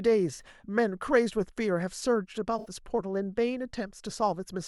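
At 0.34 to 0.41 s and again at 2.59 to 2.69 s the speech shows AAC frame loss with concealment. About 43 ms and 64 ms are missing, which fits two and three lost frames. The decoder patches each gap by reusing the last good spectrum with randomised phase, so each sounds like a brief smeared, noisy, phasey blur. On a spectrogram the last good spectrum is held frozen and smeared across the gap, and the waveform loses its periodic detail there.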